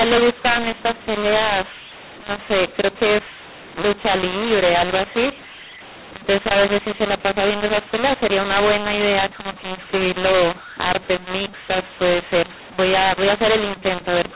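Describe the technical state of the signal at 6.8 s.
At 6.8 s the speech is affected by a mu-law and A-law mix-up that runs through the whole clip: telephone audio written with mu-law is being decoded as A-law. The two logarithmic curves disagree, so levels are remapped unevenly and near-silent samples are pushed up into audible hiss. Unlike clipping, the harshness is not limited to loud peaks, and pauses carry noise. The top stops near 4 kHz, which fits ordinary 8 kHz telephone sampling.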